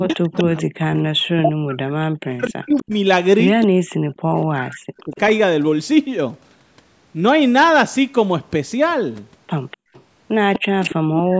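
A delayed double of the talker runs through this speech recording at 0.0–1.01 s, 2.45–2.83 s, 4.42–5.2 s and 9.71–10.94 s. Each time it trails the original by 245 ms. It is loudest at the start and end, about 10 dB below the speech, and much quieter in the middle passages, about 30 dB and 25 dB down. That is an echo leak. The far end was most likely playing the call on a loudspeaker, and its echo canceller let part of that sound back into its microphone and returned it.

Between 0.04 and 5.14 s, and again from 10.58 s to the end, the talker's level drops repeatedly in chunks, for roughly 3 s in the first span and under a second in the second, at worst by around 40 dB. This is speech suppressed in double talk. With both sides talking at once, the canceller likely could not tell the near talker from the echo and turned everything down.

At 9.77–9.93 s the room sound behind the talker dips sharply, by about 32 dB for some 150 ms, then returns. 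That is background gated by the echo canceller, which clamped the microphone while the loudspeaker was active.

The band stops at 8 kHz, in line with normal call microphone processing.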